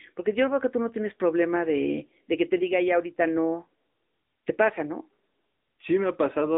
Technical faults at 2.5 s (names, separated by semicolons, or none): AMR narrowband mobile codec